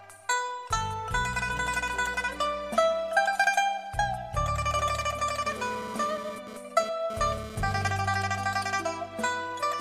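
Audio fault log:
5.46–7.92 s GSM phone buzz: a hard, raspy 217 Hz buzz about 12 dB below the sound, caused by a nearby 2G phone's bursts being rectified in the audio circuit. Its intermittent pattern suggests a data transfer. A spectrogram shows a dense comb of harmonic lines; the waveform shows a regular pulse train.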